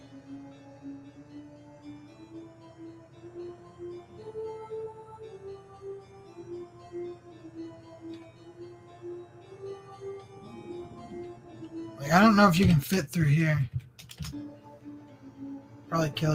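From 0.0 to 1.8 s, the sound is cut by the noise suppressor, which mistook it for noise and pulled it down by up to about 4 dB for roughly one and a half seconds. Unlike a dropout, the sound dips in level without going silent.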